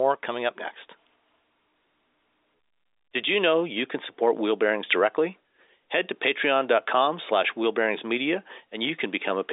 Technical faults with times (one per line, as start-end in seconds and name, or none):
none